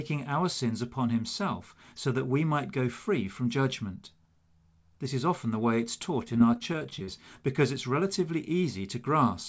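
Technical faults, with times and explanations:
6.25–7.08 s, repeated packet loss (robotic sound): between "often the way it's" and "because it's relatively", about a dozen dropouts, the longest 32 ms, are each filled by extending the preceding sound. The result is choppy, with pieces missing. The spectrogram shows smeared, repeated frames with brief breaks, and the waveform shows copied cycles.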